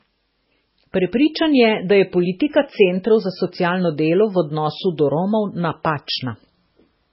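MP3 compression damages this speech recording throughout its whole length. Nothing survives above about 5.6 kHz, where the encoder has cut the treble at a fixed frequency, and the damage is heavy, which fits a very low bitrate around 16 kbps. Starved of bits, the codec has likely zeroed weaker frequency lines that flicker on and off between frames, leaving a watery, swirling texture, dulled sibilants and smeared attacks.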